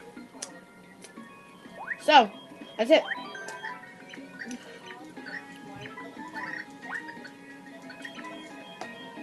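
Nothing stood out on listening; the audio carries the ordinary character of a call connection, with the top of the spectrum rolled off as a call codec would leave it, and no passage calls attention to itself.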